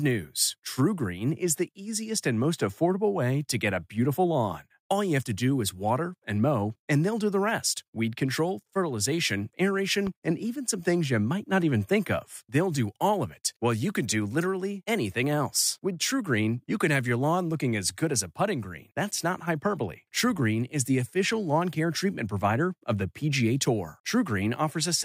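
A single sharp loud pop at 10.07 to 10.10 s, just after "rest weed control fertilization", rises a few dB above the speech, likely from a brief voltage spike.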